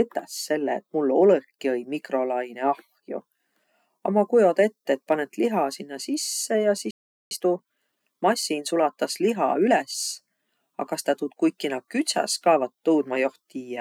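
At 6.91 s the speech cuts off mid-flow in a playback stall: the output goes completely silent for about 0.4 s, until 7.31 s, likely because the player ran short of data or its thread was blocked. A waveform shows a flat gap, and a spectrogram shows an empty vertical band.

From 7.31 s to 9.99 s comes time-compressed catch-up. The player trims its backlog by cutting out small pieces and cross-fading across the joins, so the speech runs about 1.15 times fast at unchanged pitch. A spectrogram keeps the same harmonic spacing while syllables look squeezed together.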